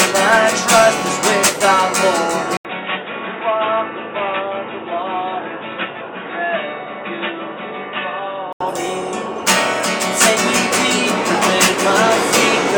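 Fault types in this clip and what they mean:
Input switched to a poorer device: from 2.57 to 8.61 s the sound goes dull and boxy, likely because a narrower-band input took over. The spectrogram is empty above 3.7 kHz, and the waveform shows an 80 ms gap, then about 10 dB lower level over faint new background noise.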